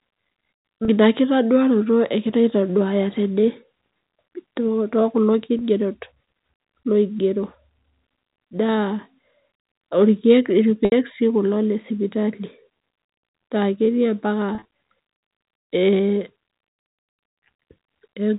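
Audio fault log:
0.85 to 16.84 s (0.85, 5.59, 10.85, 14.55 to 14.65, 16.82), packet loss with pitch repetition: gaps of 20 to 70 ms are filled by repeating the last pitch period, heard as brief held, buzzy tones, while the 70 ms gap at 10.85 s fades into silence before the speech returns.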